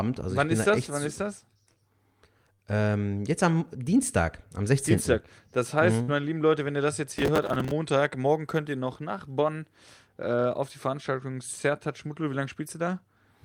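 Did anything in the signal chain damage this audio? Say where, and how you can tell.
Yes. At the network stage, two short stalls from a late packet occur, at 2.53 to 2.60 s and 6.02 to 6.09 s (after "heißt mhm"). Each holds the last sound for about 50 ms with a slight buzz or dip, then resumes exactly where it left off. Nothing is lost, so it is not a dropout.

At the driver or buffer stage, processor overload crackle runs from 7.17 to 7.71 s, between "wenn ihr das jetzt" and "morgen könnt ihr noch". Around thirty missed buffers of roughly 5 ms each replay stale audio with hard edges. The result is a gritty tearing rather than a single held sound.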